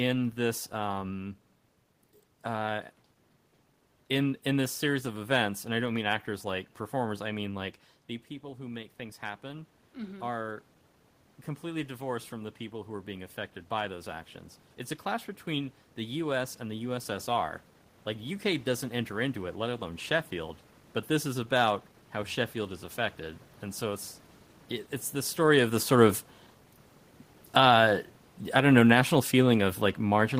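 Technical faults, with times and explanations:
25.38–30.4 s, automatic gain falling: the gain control judged the input too loud or its background noise too strong and eased its gain down over the final five seconds, so the speech fades steadily. Unlike the talker shifting position near 25 s, the room noise sinks along with the voice.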